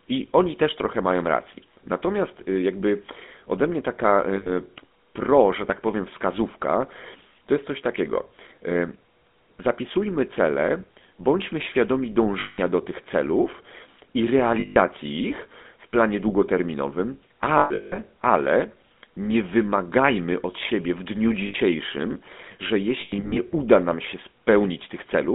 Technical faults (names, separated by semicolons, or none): GSM full-rate codec; lost GSM frames